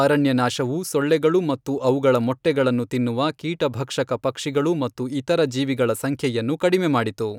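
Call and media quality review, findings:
No faults found in review.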